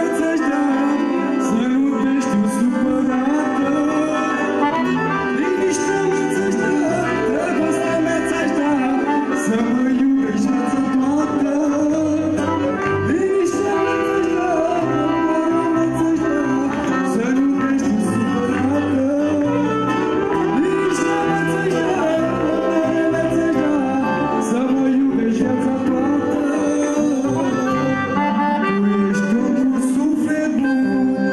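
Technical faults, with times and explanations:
Nothing here stands out as a technical problem; the audio comes across without any glitch worth flagging.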